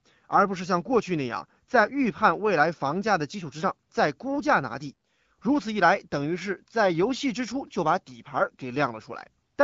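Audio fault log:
Nothing to log here; the speech comes through the AMR wideband (HD Voice) path at a rate that fits 12.65 kbit/s, with the light coding character you'd expect from that.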